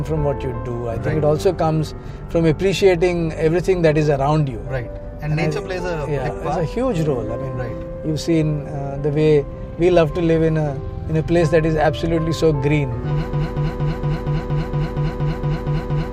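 A broken-record loop starts at 13.33 s and runs to the end: a 0.23 s fragment repeats back to back twelve times. The player, encoder or stream likely stalled and kept resending its last fragment, so the audio that should follow is lost.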